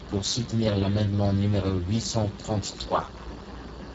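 From start to finish, the speech carries heavy Speex codec damage. The codec has too few bits for the excitation, which fits a bitrate near 6 kbps. Speech sounds hoarse and noisy. Nothing remains above 7.7 kHz.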